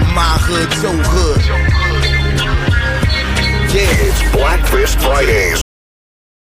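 At 5.61 s the sound stops abruptly mid-event. This is a cut-off end. The final stretch of audio was never written or played out. There is no decay. The signal drops straight to digital silence, which lasts until 6.53 s.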